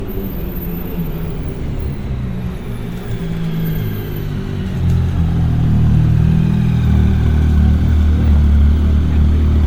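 A recording of sounds with generation loss throughout. It sounds swirly, smeared and hollow, with blurred attacks. This likely comes from about seven MP3 passes near 96 kbit/s.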